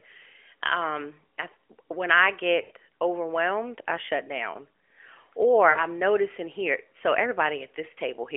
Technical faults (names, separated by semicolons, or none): lost AMR speech frames